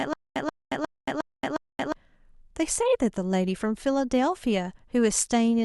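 From the very start to 1.92 s, the speech stutters with silent gaps: a 132 ms burst repeats five times, each followed by about 226 ms of dead silence, every 358 ms. A stalled stream likely kept replaying its last fragment, losing the audio in between.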